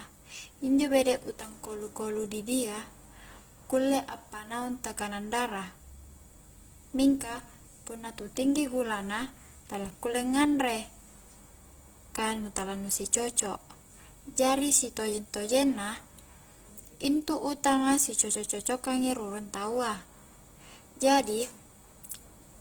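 Throughout the speech, the audio has likely passed through Opus compression in its music mode at a very low rate, consistent with around 16 kbps. Starved bands are filled with folded or noisy content, so the speech turns plainly grainy and rough, though full bandwidth reaches about 20.1 kHz.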